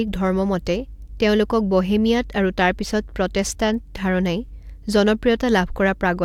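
Listening to the speech, nothing stood out as a technical problem.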